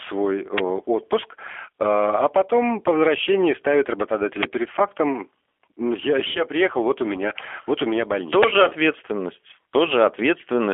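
Throughout, the speech sounds rough and synthetic from the G.729 codec, which fits an 8 kbit/s G.729A stream. It is band-limited to 300 Hz to 3.4 kHz.

At 4.43 s, an uninitialised buffer bursts out as loud digital noise. Leftover memory was played as samples, which fits a 512-sample buffer.

From 6.31 to 6.40 s, VoIP packet loss concealed by the speech codec turns the speech into a fading buzz. About 40 ms is missing, then it recovers weakly.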